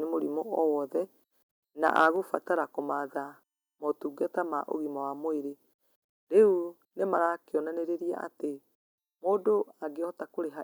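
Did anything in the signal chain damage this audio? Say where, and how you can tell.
Yes. From 1.85 to 2.08 s the loudest stretch of speech takes on a harsh, crackly edge, with the waveform tops squared off across roughly 2 percent of the samples. This points to microphone overload at the converter stage. The input gain was likely set so high that the peaks would have run about 4 dB past full scale, so the analogue-to-digital converter flattened them at its ceiling and added that gritty distortion.

At 2.16 s, just after the distorted stretch, the speech and the background both drop by about 3 dB in a single abrupt step rather than a gradual fade. This is the microphone volume stepped down in the call-processing stage. The call software likely registered the overload and cut the device's input gain at once. The timing, immediately following the clipped peaks, and the equal drop in voice and room noise fit an input-level change rather than a change in how the talker spoke.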